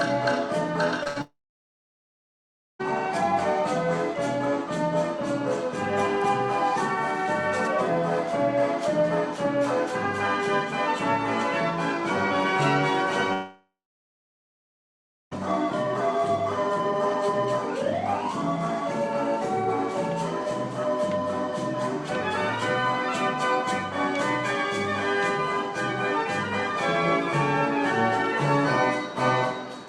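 At 1.03 s there is a short concealed packet loss. About 20 ms went missing, and the receiver bridged it with a brief smeared continuation.

From 1.07 to 1.17 s a burst of packet loss follows. Roughly 80 ms is lost; the held sound fades, then audio resumes further on.

From 1.21 to 2.81 s the sound stops. A short fading tail gives way to about 1.45 s of silence. This is likely a long network dropout. The same happens from 13.33 to 15.33 s, with about 1.6 s of silence, again likely a long network dropout.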